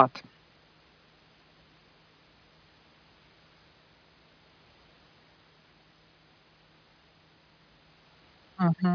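No dropouts, clicks, distortion or level jumps are audible in the recording at any point.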